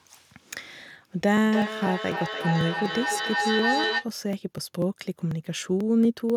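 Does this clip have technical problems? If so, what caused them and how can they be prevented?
Yes. Periodic USB or driver dropouts run from 0.14 to 6.30 s: every 0.246 s a few milliseconds of audio, around 4 ms, is skipped, giving an even ticking under the speech. On a waveform these show as abrupt steps in the signal. On a spectrogram they appear as thin, regularly spaced vertical broadband lines. Prevent this by stopping the background task that periodically stalls the USB bus or audio driver, or by enlarging the driver buffer.

Feedback echo between two devices appears from 1.34 to 4.11 s. A second device in the room replays the speech, and the first microphone captures it again, so the speech returns about 300 ms later, peaking at about 3 dB below the speech itself. On a spectrogram it looks like a fainter, thinner duplicate of the speech patterns offset by roughly 0.3 s. Prevent this by muting the microphone and speaker on all but one device in the room.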